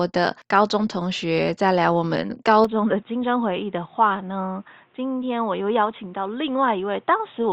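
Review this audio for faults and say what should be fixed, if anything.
Input switched to a poorer device, from 2.65 s to the end: the speech abruptly turns dull and boxy with nothing above 3.8 kHz, drops about 5 dB, and gains a faint new noise floor roughly 40 dB down, with no gap at the change, likely a mid-recording switch to a narrower-band microphone. Lock the recording input to one device and disable automatic switching before recording.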